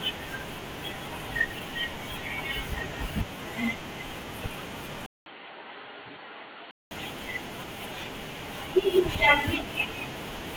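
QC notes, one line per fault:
5.06–6.91 s, input switched to a poorer device: after a 200 ms gap, the speech turns dull and boxy and about 5 dB quieter, with nothing above 4.5 kHz and faint new background noise beneath it. The input likely jumped to a narrower-band microphone, then back.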